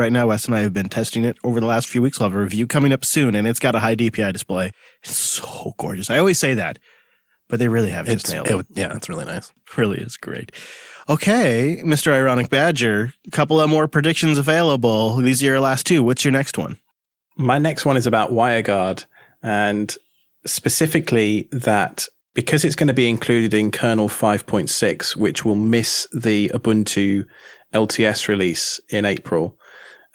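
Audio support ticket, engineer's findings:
Lost packet rebuilt from error correction, 25.33 to 25.67 s. Speech briefly rougher and noisier, with no dropout. Decoder played low-bitrate redundant copies carried in following packets. Points to about nine lost packets, roughly 180 ms rebuilt. Spectrogram: smeared, grainier texture.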